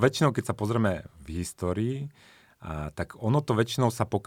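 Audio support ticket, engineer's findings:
No audible faults found in this speech recording; no symptom to trace to any component.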